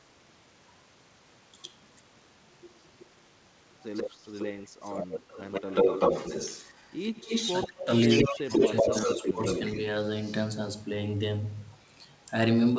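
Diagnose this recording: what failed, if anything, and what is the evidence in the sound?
A far-end echo canceller likely left loudspeaker pickup in the return signal, so an echo leak sends the speech back about 135 to 150 ms late. It occurs at 3.83–4.11, 4.27–4.46, 4.83–7.68, 8.11–9.78 and 10.23–10.32 s: about 10 dB down early, near the speech's own level mid-clip, and faint at the end.

The same call processing likely could not separate the local talker from echo while both were active, and turned both down. Speech suppressed in double talk shows as drops of about 30 dB between 7.67 and 8.11 s and about 15 dB across 8.29–9.45 s, leaving the speech dipped.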